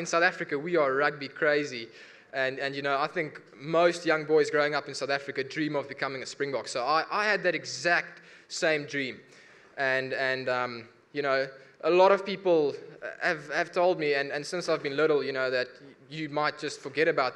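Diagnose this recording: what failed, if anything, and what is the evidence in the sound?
No failure is audible here.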